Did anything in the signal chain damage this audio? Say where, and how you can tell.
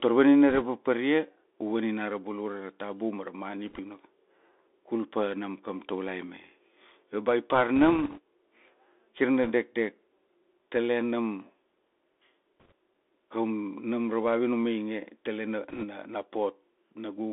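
Yes. The codec stage did it: the whole speech clip went through the Bluetooth CVSD headset codec. The band sits at roughly 250 Hz to 3.6 kHz, the s sounds come out scratchy, and a grainy hiss sits under the speech. All of that fits 64 kbps delta modulation whose step can't keep up with loud high content.

On the Bluetooth link itself there are bursts of bit errors. You hear a rushing crackle at 0.50–0.63, 3.68–3.80, 7.76–8.19, 9.43–9.51, 12.60–12.72 and 15.69–15.85 s, with error rates somewhere around 1 to 2 percent. No bit outweighs the others and each error dies away fast, so there are no loud clicks.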